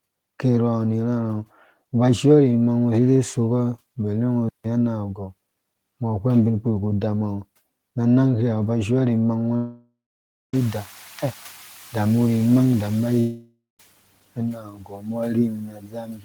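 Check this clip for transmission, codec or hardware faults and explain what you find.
Five faults are audible in this speech: one playback stall, two long network dropouts and two stretches where the noise suppressor cuts into the speech.

Playback stall, 4.49 to 4.64 s: the player most likely ran short of data or was blocked, so the speech halts for about 157 ms before resuming.

Long network dropouts, 9.56 to 10.54 s and 13.20 to 13.80 s: no packets likely arrived for about 970 ms and 590 ms. The receiver stretches the last sound into a fading buzz, then goes silent for about 560 ms and 160 ms before speech returns with that audio missing.

Speech cut by the noise suppressor, 5.15 to 5.32 s and 14.35 s to the end: the suppressor mistakes speech for noise and pulls it down with the background. In the first stretch, about a tenth of a second sounds swallowed, dipping by about 8 dB. In the final stretch, the speech is faint and dulled by up to about 18 dB. 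The room noise that rises by about 22 dB around 10.5 s belongs to the recording rather than the system.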